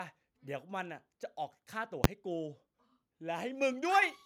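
A sudden, very loud bang at 2.04 s cuts through this speech recording, a single hard crack far beyond the peaks of the speech. It is the sound of invalid numbers at full scale: a calculation produced infinite or invalid values, which were clamped to the extreme positive or negative sample value and held there. The burst lasts only about 10.7 ms, which fits a 512-sample processing block, so the onset and release collapse into one bang rather than two separate pops. Near the end, at 4.02 s, the speech and the background noise beneath it jump louder together by about 7 dB in a single step. That is the microphone volume stepped up: the call software judged the input too quiet and raised the device's input gain at once, lifting everything the microphone picks up.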